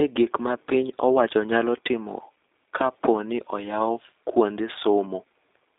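From start to finish the speech has the G.729 codec's signature on it, and fairly obviously so. Everything sits in a narrow telephone band, roughly 300 Hz to 3.7 kHz, so there's no air or sibilant sparkle up top and little body underneath. It's rebuilt from a vocal tract model, a pitch predictor and a sparse set of pulses rather than the actual waveform, which leaves it slightly rough and synthetic. That fits an 8 kbit/s codec, likely G.729A.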